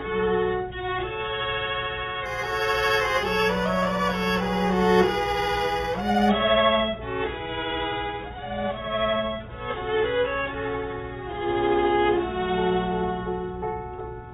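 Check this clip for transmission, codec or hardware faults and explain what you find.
One fault, imaging from linear upsampling, between 2.26 and 6.29 s. Audio sampled at 8 kHz was raised to 44.1 kHz by joining samples with straight lines, a weak filter that dulls the top of the band and lets a mirror copy through at 4 to 8 kHz, roughly 20 dB down, heard as a faint metallic shimmer.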